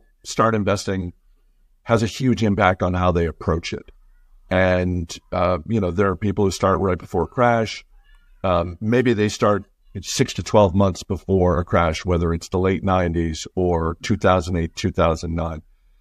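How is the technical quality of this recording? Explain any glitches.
One fault stands out, a single pre-echo at 10.44 s.

Pre-echo at 10.44 s, just after "they start six to": the codec spread quantisation noise across a whole transform block ahead of a sharp attack, consistent with a long window of about 36 ms and no switch to short blocks. About 17 ms of hiss, roughly 12 dB up, precedes the onset and softens it.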